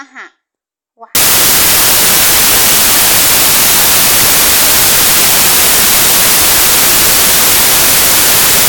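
From 1.15 s to the end, the speech turns into loud white noise: samples built from the wrong bytes, with the low-order bits taking over each value. A spectrogram fills flat across all frequencies, and the waveform becomes a dense block, thinning only at near-silent moments.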